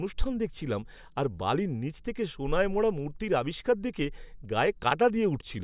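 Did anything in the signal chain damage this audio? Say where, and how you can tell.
No, nothing in this speech recording stood out on listening as damage from any stage of the signal chain.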